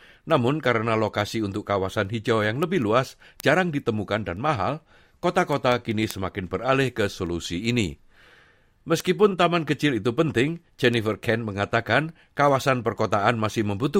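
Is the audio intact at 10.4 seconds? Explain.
No, 10.4 s falls inside a run of word clock ticks from 0.12 to 13.84 s: unsynced clocks slip about every fifth of a second, leaving sharp, uneven clicks.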